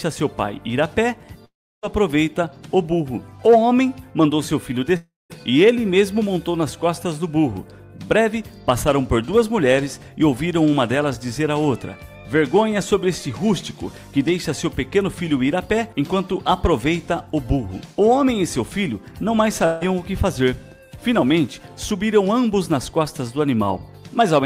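A likely long network dropout cuts off incoming audio at 1.45–1.85, 4.97–5.32 and 19.66–19.88 s. A fading buzz fills each gap, the first two falling silent, and the lost sound never returns.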